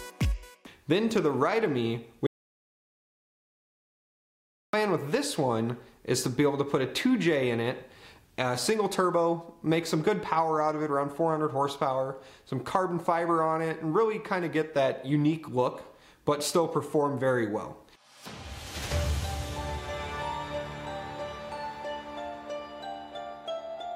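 At 2.27 s the sound just stops dead and stays silent until 4.73 s, about 2.47 s with not even room tone underneath. That's an audio dropout to silence, most likely the input link dropping while the recorder kept writing silence, so whatever happened there is gone.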